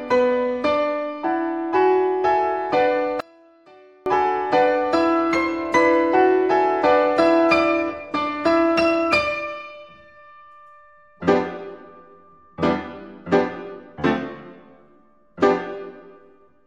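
From 3.20 to 4.06 s, one stereo channel likely had its polarity flipped, so everything common to both sides cancelled when summed to mono. The sound drops by about 32 dB, leaving only a faint residue of the channel difference until it returns.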